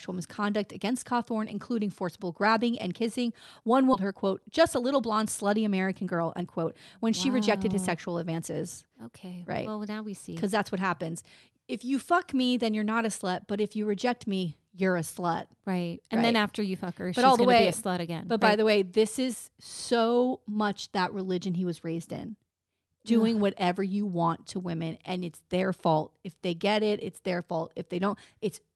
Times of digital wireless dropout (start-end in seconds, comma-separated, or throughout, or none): none